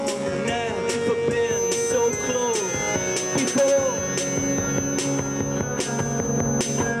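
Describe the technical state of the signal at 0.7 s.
At 0.7 s the signal is intact, with no dropout, distortion or other audible fault at that moment.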